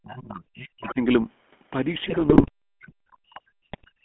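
GSM full-rate codec coding runs through the whole clip. The speech sits in a narrow line band of roughly 200 Hz to 3.4 kHz, and the pulse-driven vocal-tract model leaves a plainly audible buzzy, gravelly roughness, consistent with a 13 kbps full-rate stream.

Speech suppressed in double talk appears from 0.0 to 1.0 s. The talker's level sinks by as much as about 40 dB. This is likely the echo canceller reacting to both sides talking at once and turning the near voice down along with the echo.

The other side's voice leaking through shows up inside that stretch, from 0.84 to 0.94 s, as a brief stray voice about 15 dB below the speech. It is likely loudspeaker echo that the canceller failed to remove from the microphone.

GSM bit errors hit from 2.04 to 2.49 s. Corrupted filter, pitch and gain values reach the decoder, bending the spectrum and jolting the level frame by frame into squawks, pops and gargling. 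That span suggests a couple of dozen damaged frames.

Speech suppressed in double talk returns from 2.7 s to the end, with the same dips of up to about 40 dB. The likely cause again is the canceller ducking the talker while the far side speaks.

A second burst of GSM bit errors, from 3.72 to 3.85 s, falls inside that suppressed stretch. It brings another short flurry of gargled, popping frames, denser but briefer than the first.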